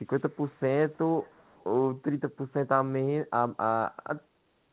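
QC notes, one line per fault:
0.06–0.6 s, 0.81–0.98 s and 1.22–1.64 s: echo leak. The far end's echo canceller likely failed to fully remove its loudspeaker pickup, so a faint copy of the speech returns 328 ms late, roughly 30 to 35 dB below the direct sound.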